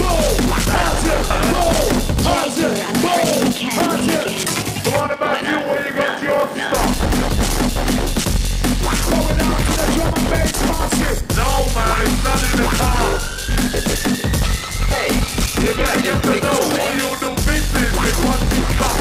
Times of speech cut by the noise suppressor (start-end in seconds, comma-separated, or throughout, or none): none